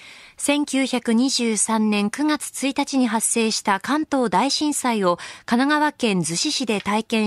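Speech recording with no audible technical faults.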